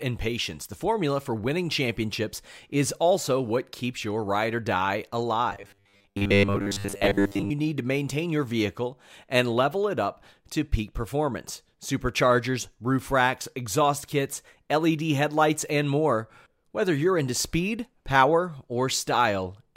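From 5.50 to 7.50 s the speech becomes a rigid 100 Hz metallic buzz. That's robotic sound, likely from repeated short buffers around 10 ms long.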